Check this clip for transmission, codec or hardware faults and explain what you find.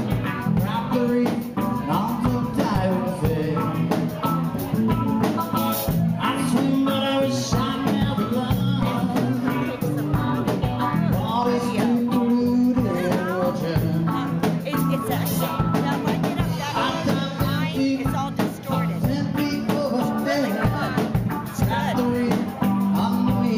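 Three low thumps, at 2.75 s, 8.83 s and 20.65 s, each a short dull knock under the sound, which carries on unchanged. They are DC steps: the waveform's zero line jumps abruptly by about -21 dBFS at the first two points and about -20 dBFS at the third. A 20 Hz high-pass then pulls each offset back toward zero, so the sudden shift lands as a brief low-frequency pulse rather than a lasting change.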